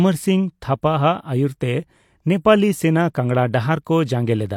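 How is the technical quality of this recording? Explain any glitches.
One glitch stands out: a pre-echo at about 3.14 s, right after "ᱟᱹᱭᱩᱨ ᱛᱮ ᱱᱮᱯᱟᱞᱤ ᱥᱮᱱᱟ". A sharp attack there lands late in a codec block, and because the coder spreads its quantisation noise across the whole block, the noise budgeted for the loud attack leaks into the quiet moment just before it. You get a short hiss of roughly 10 ms ahead of the onset, and the attack itself loses some crispness, sounding soft or smeared.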